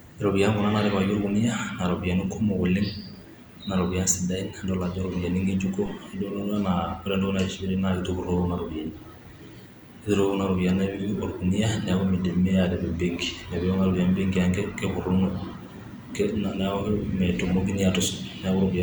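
A phantom power thump at 5.86 to 5.99 s: a supply switching on the live input pushes a step through the coupling capacitors, giving a deep thump peaking around -27 dBFS and dying away within about 29 ms.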